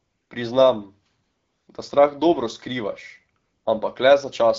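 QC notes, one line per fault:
0.00–0.29 s, 1.23–1.67 s, 3.41–3.65 s: AMR comfort noise. The phone stops sending speech frames in these pauses. The receiver substitutes a smooth synthetic hiss that switches in and out.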